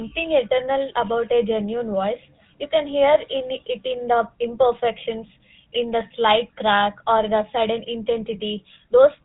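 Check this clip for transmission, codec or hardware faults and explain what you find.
One codec fault runs through the whole clip. GSM full-rate codec, throughout: a pulse-driven vocal-tract model caps the band at 4 kHz, giving plainly audible buzzy, gravelly speech that fits the 13 kbps GSM rate.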